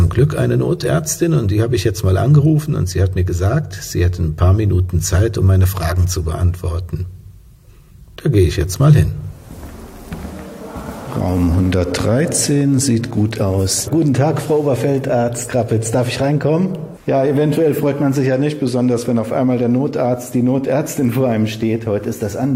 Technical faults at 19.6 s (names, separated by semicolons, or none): none